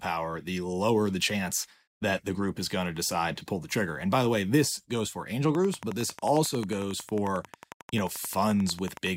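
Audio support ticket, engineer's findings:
Train of clicks, 5.55–9.08 s, speech underneath. Regular ticking at 11.1 clicks/s, about forty in all, peaks a few dB above the speech and audible in pauses too. Waveform: evenly spaced near-identical spikes. Spectrogram: thin vertical broadband lines at fixed spacing. Likely cause: periodic interference from nearby equipment or a faulty connection or power supply injecting pulses.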